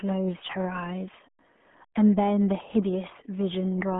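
RealAudio 14.4 codec damage runs throughout: heavy coding that points to an 8 kbit/s stream removes everything above 3.6 kHz, leaving speech muffled and gargly.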